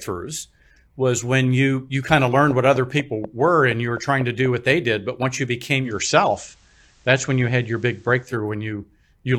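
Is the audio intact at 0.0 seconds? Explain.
Yes, at 0.0 seconds the speech is intact, with no audible dropout, distortion or other fault at that moment.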